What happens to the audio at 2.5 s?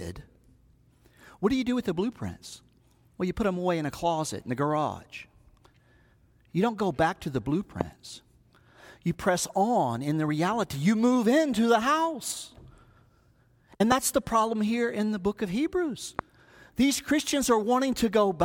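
Nothing goes wrong at 2.5 s; the speech runs on intact through that moment, with no dropout, click, distortion or other fault.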